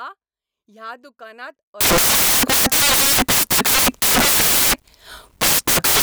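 Samples built from the wrong bytes, from 1.81 s to the end of the clip, just after "ह्या दुकानांत". Here the reader assembles each sample from misaligned or swapped bytes, so the rapidly varying low-order bits land in the high-order positions and dominate every value. The speech is replaced by loud, hissing noise, close to white on the louder sounds.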